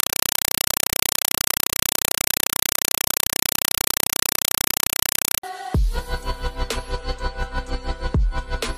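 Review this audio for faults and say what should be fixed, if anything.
From 0.0 to 5.43 s the sound is replaced by very loud, chattering static. This is a compressed stream played as audio: an AC-3 bitstream is treated as plain samples, so each frame becomes a 4 ms noise burst followed by silence, repeating at 31.25 Hz. To prevent it, set the receiving device to decode Dolby Digital, or have the source send decoded PCM.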